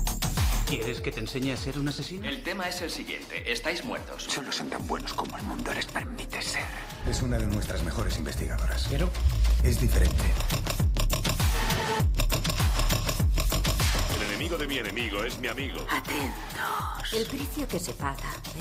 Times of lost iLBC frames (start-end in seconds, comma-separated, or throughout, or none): none